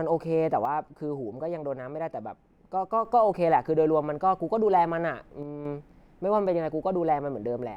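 From 0.65 to 3.05 s the speech level falls abruptly by about 6 dB, then jumps back. The same dip returns from 5.43 to 5.65 s. The likely cause is that one channel drops out, halving what both channels shared in the mono sum.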